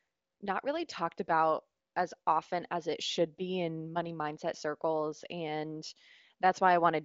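The speech carries no technical fault; its content stops at 7 kHz, as expected from the AMR wideband (HD Voice) codec it passes through, and the little coding damage there is sounds faint, which fits the codec's high rate of 23.05 kbit/s.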